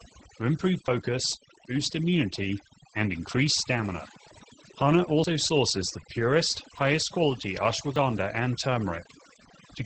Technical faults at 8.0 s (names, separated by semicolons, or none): overdone noise removal; Opus voice compression; dropped buffer (overrun)